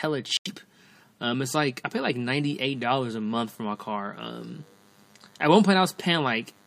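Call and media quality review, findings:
Corrupt frame muted, 0.37 to 0.48 s: abrupt dropout of about 0.1 s, consistent with four codec frames. Bit errors made the decoder reject those frames. The player substituted silence and kept the timeline intact.

DECT cordless phone buzz, 2.16 s to end, starting after "like I pay like": steady, thin 100 Hz buzz rich in harmonics, roughly 35 dB below the speech. A nearby DECT handset or base transmits a burst every 10 ms, and the audio circuitry rectifies it.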